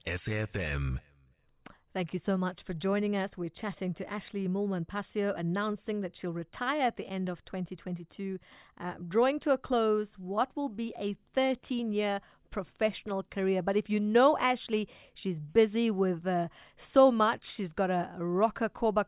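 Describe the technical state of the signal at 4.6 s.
At 4.6 s the speech signal is intact, with no audible technical fault at that moment.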